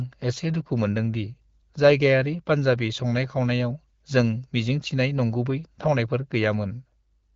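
There are no technical faults to describe in this speech, which comes through an AMR wideband (HD Voice) link at 12.65 kbit/s.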